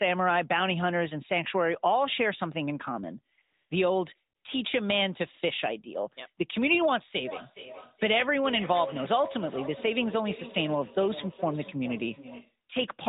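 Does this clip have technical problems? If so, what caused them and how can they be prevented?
Yes. AMR comfort noise appears at 3.36 s, from 3.42 to 3.70 s, and from 4.36 to 4.44 s. The phone's voice detector judged these moments silent and stopped sending speech frames, so the receiver filled them with smooth synthetic noise in place of the real background. To prevent it, disable discontinuous transmission or make the voice activity detector less aggressive.

Feedback echo between two devices runs from 7.27 to 12.58 s. The speech returns roughly every 0.4 s, at least about 13 dB below the direct speech, because one device's loudspeaker is feeding the other device's microphone outside either echo canceller. To prevent it, keep only one device per room on the call, or mute the second device's microphone and speaker.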